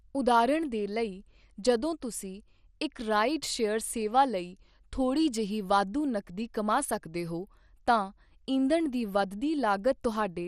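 From start to finish the speech carries MP2 compression damage, plainly audible as a dull, gurgling graininess that comes from the likely cause: an MPEG Layer II encoder short of bits, which fits a rate around 64 kbps. Starved sub-bands drop out and return, while the surviving ones are coarsely quantised. A spectrogram shows nothing above 14.3 kHz, with upper bands flickering on and off as blocky patches instead of smooth energy.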